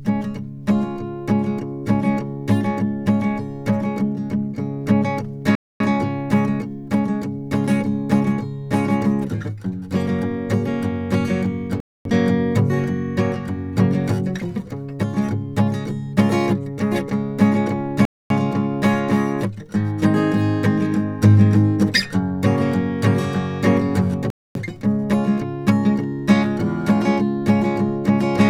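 The music was delivered in chunks of about 6 seconds, and a silent gap was left between chunks at each join instead of running them together. Four holes of 250 ms each result, at 5.55 to 5.80 s, 11.80 to 12.05 s, 18.05 to 18.30 s and 24.30 to 24.55 s. The music drops out with hard edges at each one, then resumes without anything missing, so the pauses recur at a steady rhythm.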